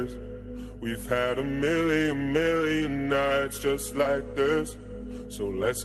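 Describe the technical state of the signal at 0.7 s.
At 0.7 s the signal is intact, carrying only the ordinary coding texture and the roughly 12 kHz upper band limit of the Opus call path it passed through.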